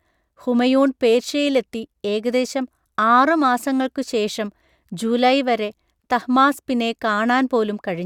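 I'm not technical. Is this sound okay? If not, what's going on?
Yes, I listened closely and nothing in this recording stood out as a problem.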